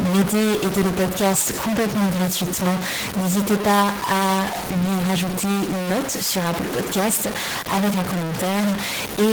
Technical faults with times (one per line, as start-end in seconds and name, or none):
0.00-9.32 stuck bit
0.00-9.32 Opus voice compression